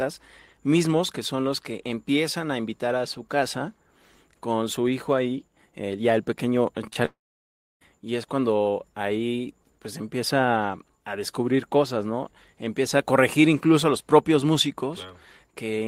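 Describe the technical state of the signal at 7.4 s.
At 7.4 s the signal sits inside a long network dropout, 7.05 to 7.83 s after "eh ya el pequeño": the sound trails into a fading buzz, then near-silence, resuming at "y es cuando ahí", likely lost packets.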